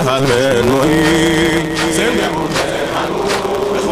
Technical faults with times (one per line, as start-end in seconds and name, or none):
0.00-3.91 block size mismatch (truncated)